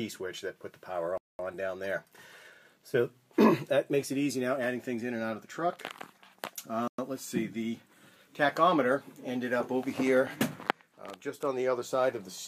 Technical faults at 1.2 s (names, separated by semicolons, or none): Bluetooth stall